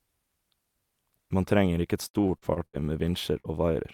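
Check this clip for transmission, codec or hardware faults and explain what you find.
Two transmission faults affect this speech, both from packets lost on the way to the receiver.

From 2.07 to 2.86 s, just after "trenger ikke et", the speech turns choppy and robotic. This is repeated packet loss: holes, the longest 77 ms, kept arriving, and the receiver patched each by extending the previous sound. About 246 ms is filled in, over a third of the stretch, and 160 ms is lost outright.

At 3.40 to 3.47 s there is a brief smear. This is short concealed packet loss: about 40 ms never reached the decoder in time, so the receiver continued the preceding sound for 43 ms before blending back into the real signal.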